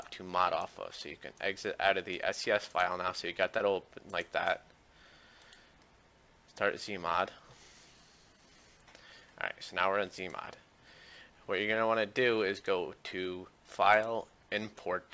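Around 3.58 to 3.62 s there's short concealed packet loss: roughly 20 ms went missing, and the receiver papered over it by stretching the preceding sound, leaving a brief smear.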